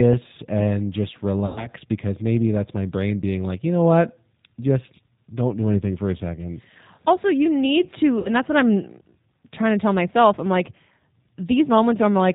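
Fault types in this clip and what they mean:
G.729 codec: this 8 kbit/s VoIP codec rebuilds speech from a filter and pulses, so everything sits below 4 kHz and sounds plainly rough and synthetic.
VoIP packet loss concealment by the speech codec: after "and just" and "you need", the decoder stretches the last sound into a fading buzzy tone or coloured noise, which fits about 100 ms and 60 ms lost.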